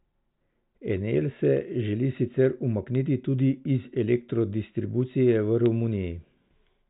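No technical faults can be heard in this speech. It comes through a telephone-band G.726 ADPCM path with nothing above 3.8 kHz, and the codec's hiss is faint at most, which fits the 40 kbit/s rate.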